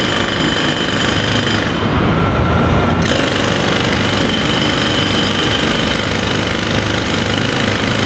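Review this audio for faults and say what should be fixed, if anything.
Gain pumping runs through the whole clip. The gain swings by around 15 dB, pulled down on each loud sound, likely from far too much mic gain feeding a fast limiter. On a waveform the envelope looks squashed flat, with the noise floor bulging up between events. On a spectrogram the background band brightens and darkens in step with each loud sound, above an Opus call path whose content stops near 8 kHz. Lower the input gain so the limiter only catches occasional peaks.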